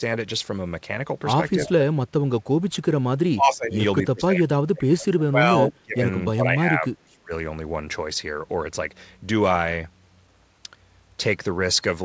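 The speech dips at 1.55–1.84, 2.24–2.29, 3.34–3.78, 4.01–6.05 and 6.28–7.31 s, by up to about 30 dB. This is likely speech suppressed in double talk, with the echo canceller muting overlapping speech.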